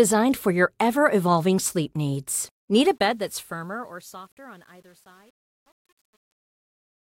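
Right after "sleep needs" at 2.80 s, the speech fades out from 2.80 s. The fade shows truncation distortion: it's quantised with no dither, consistent with roughly 9-bit resolution. From 3.61 s to the end at 7.01 s the tail turns gritty.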